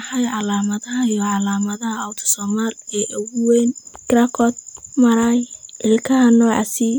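No dropouts, glitches, distortion or level jumps turn up anywhere in this speech recording, and nothing in it calls for attention.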